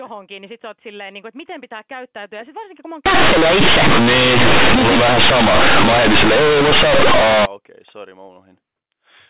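From 3.06 to 7.46 s, mu-law companded audio is read as linear 8-bit samples without expansion, so every sign change throws the output across roughly half its range. The speech turns harshly loud and buzzy, with heavy noise filling the pauses, in a 4 kHz-limited telephone-band clip.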